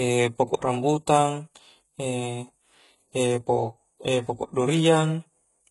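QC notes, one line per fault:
Throughout: likely HE-AAC compression, heavy damage fitting about 12 kbps; treble is rebuilt from copied lower bands, so s sounds turn gritty, with nothing above 11.5 kHz.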